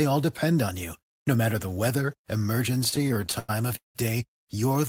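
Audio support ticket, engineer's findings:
Repeated stalls (stutter), 2.81 to 3.97 s. Speech drags through 14 short gaps, longest 182 ms. Jitter buffer running dry on late packets. Receiver stretches last sound, fading it in longer waits. 414 ms filled, nothing lost.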